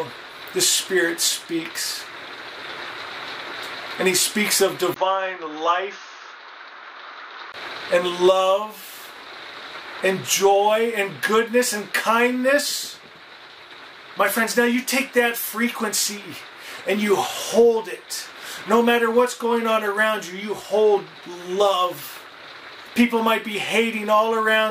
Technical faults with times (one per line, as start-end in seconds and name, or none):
4.94-7.54 input switched to a poorer device